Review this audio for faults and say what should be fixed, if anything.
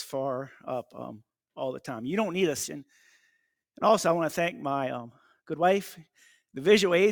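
At 2.63 to 2.65 s there is a skip ahead: roughly a second and a half of audio was discarded while later audio was already queued, so playback jumps forward with no fill. On a waveform the envelope changes abruptly at the splice, and a spectrogram shows a sharp vertical seam where unrelated content meets without any silent gap. Sizing the jitter buffer so it drains gradually instead of dumping a backlog on overflow would prevent this.

From 3.3 to 7.06 s the jitter buffer speed-up runs the sound at about 113% of normal speed at unchanged pitch, as the receiver trims excess buffered delay by repeatedly deleting short pitch-period pieces, around half a second in total. The result sounds hurried. On a spectrogram, harmonic lines keep their frequency while events arrive closer together than normal, and the waveform shows periodic cycles compressed in time without any change in cycle length. 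Limiting catch-up to a gentler rate, or spreading the adjustment over a longer time, would prevent it.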